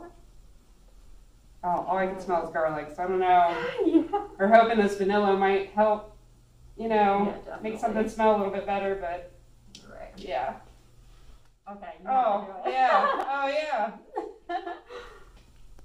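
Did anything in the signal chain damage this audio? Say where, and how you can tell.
Yes: chunks out of order in the buffer stage, 13.21–13.23 s. A 10.67 ms block plays one slot late, leaving three hard joins, visible as waveform discontinuities.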